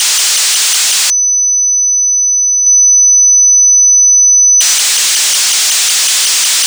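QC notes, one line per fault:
2.67–4.75 s: doubled audio track. A second full-band copy of the sound trails the original by roughly 200 ms, about 5 dB quieter, with no decay or room colour, and it cuts in and out abruptly. It is likely a second capture path or misaligned edit. On a spectrogram every onset repeats as a fainter ghost shifted right; the waveform shows stacked, offset transients.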